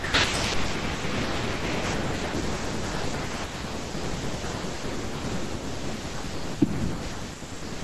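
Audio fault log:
No faults detected in this speech recording.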